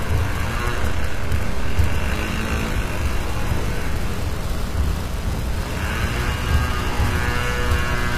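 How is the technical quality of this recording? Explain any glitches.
The technical quality is poor. Two faults are audible: a codec artefact throughout and a buzz for most of the clip.

HE-AAC compression is likely, running from start to finish. The treble sounds gritty and metallic, and nothing is present above 14.9 kHz. Only the lower spectrum is properly coded. The top is rebuilt by copying lower bands upward, so its harmonics don't match. The damage is plainly audible and fits a low bitrate near 24 kbps.

Mains buzz starts at 1.40 s and continues to the end. It is a steady, raspy buzz based on 60 Hz. Sharp switching spikes, from a dimmer, a rectifier or a missing shield, enter twice per mains cycle. They spread harmonics up into the kilohertz range. The buzz sits fairly close in level to the sound itself.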